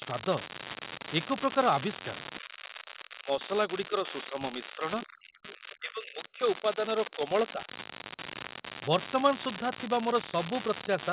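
An unreliable data bit runs through the whole of this speech recording. One marginal data line flips its bit in a random share of samples, so identical-sized spikes produce a steady crackle or fizz that continues through the pauses as well as under the talker. Speech suppressed in double talk is the likely cause of the dips at 2.4 to 3.51 s, 3.68 to 6.8 s, 7.06 to 7.32 s and 7.53 to 7.68 s. With both sides talking, the echo canceller couldn't tell the talker from loudspeaker echo and turned the voice down. The drop reaches about 35 dB in the long middle stretch, roughly 15 dB in the first, and about 10 dB and 5 dB in the last two. The whole recording sits in a band topping out near 4 kHz, which fits a G.711 A-law call codec.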